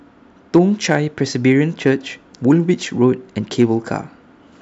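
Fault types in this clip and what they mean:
Hard clipping: the speech peaks are driven slightly past what a stage in the chain can pass, by only about 0 to 2 dB, so the tops of the loudest waveform peaks are sliced flat. Those flattened tops add harmonics high in the spectrum, heard here as brief crackle on the peaks rather than a continuous fuzz, in five spots: 0.55 to 0.95 s, 1.51 to 1.90 s, 2.51 to 2.53 s, 3.04 s and 3.61 to 3.63 s.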